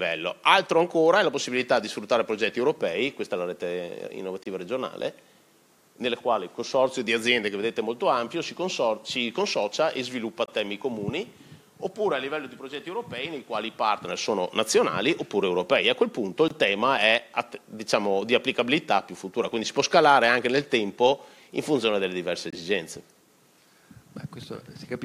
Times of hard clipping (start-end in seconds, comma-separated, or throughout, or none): none